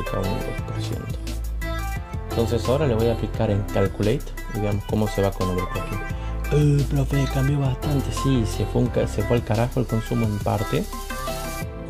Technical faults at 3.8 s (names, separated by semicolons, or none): none